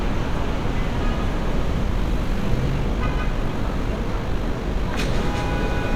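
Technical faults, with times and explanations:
1.82–5.08 s, time-stretched section: pace abruptly jumps to 1.88 times faster with pitch unchanged, sounding rushed, likely from software dropping short slices to shorten it.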